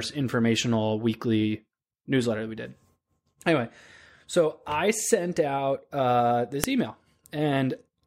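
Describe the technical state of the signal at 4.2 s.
At 4.2 s the speech signal is intact, with no audible dropout, distortion, glitch or other technical fault.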